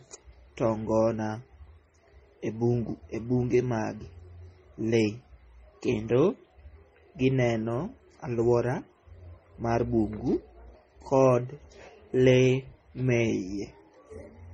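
Speech runs throughout with a layered, smeared coding sound that points to transcoding between lossy codecs, likely an MP3 pass at around 32 kbit/s re-encoded to AAC-LC at a similar rate. Unlike a single low-bitrate encode, the dull top end from the lowest cut-off in the chain persists while the second codec adds its own artefacts on top, so two distinct kinds of damage are heard together rather than one consistent texture.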